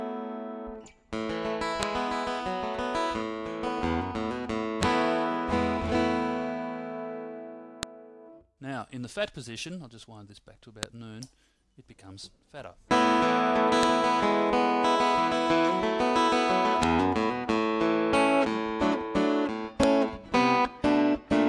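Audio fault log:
1.83, 4.83, 7.83, 10.83, 13.83, 16.83 and 19.83 s: file header played as audio. You get a sharp, loud snap every 3 s on the dot, regardless of what the sound is doing at that moment. It looks like the audio arrived as 3-second WAV pieces joined end to end with each piece's header left in. Those few dozen bytes get read as sample values, so they come out as a brief burst of junk, heard as a click.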